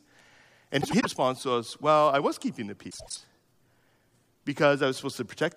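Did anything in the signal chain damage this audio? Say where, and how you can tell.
Yes: frames out of order on the network, at 0.81–1.06 s and 2.90–3.17 s. Two adjacent 96 ms blocks play swapped, giving garbled flutter.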